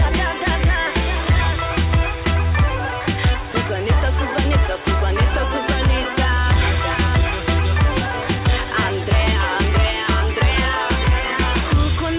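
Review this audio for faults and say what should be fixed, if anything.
At 3.52 to 3.54 s the sound gives way to 20 ms of steady low-level noise, then resumes. This is likely sound dropped by the voice detector: the sender classed a quiet moment as background and stopped transmitting, and the receiver filled the gap with comfort noise. Lowering the detector's threshold or lengthening its hangover time after activity would keep short passages like this one transmitted. The call path's cut-off at 4 kHz, consistent with narrowband G.711 coding, is present throughout the clip.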